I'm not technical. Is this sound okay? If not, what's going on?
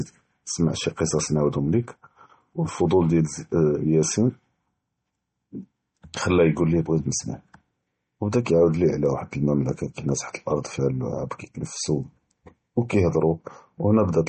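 No, not quite. All the way through, the speech sounds dull and watery, like it's coming through a cheap phone line. Nothing comes through above about 8.4 kHz, so the crisp top end of s and t sounds is gone, and quieter details seem to flicker or swirl. That's most likely heavy MP3 compression: to save space, the file kept only what it judged most important and threw the rest away.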